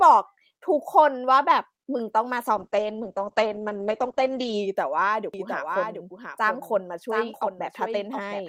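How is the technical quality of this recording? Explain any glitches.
The recording has two clear technical faults: a stretch of degraded coding early on, and a doubled signal that runs from the middle to the end.

From 2.56 s to 4.81 s there is a call bitrate drop. The encoder was forced to spend far fewer bits, which fits a fall from around 48 kbps to about 9 kbps. It holds at its worst for about 2 s. With so little data the speech turns rough from coarser coding and muffled because the bandwidth narrows from 20 kHz to 8 kHz. On a spectrogram, everything above 8 kHz disappears behind a flat ceiling, and the remaining energy looks smeared and blocky.

From 5.34 s to the end there is a doubled audio track. A full-band copy of the speech trails the original by roughly 0.7 s and sits about 5 dB lower. It arrives with no reverberant tail or room colouring and starts abruptly. The likely cause is a second capture through a slower path being mixed back in. 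The waveform shows a fainter duplicate envelope offset by that gap, and the spectrogram repeats each pattern shifted right.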